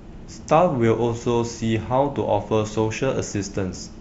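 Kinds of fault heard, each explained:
No audible faults are present in this speech clip.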